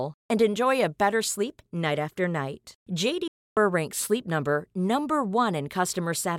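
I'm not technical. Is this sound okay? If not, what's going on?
No. At 3.28 seconds the receiver stopped getting good data, a digital broadcast dropout, and muted itself until good data returned. The speech fades to silence almost instantly, stays gone until 3.57 seconds, and that roughly 0.3 seconds of speech is lost.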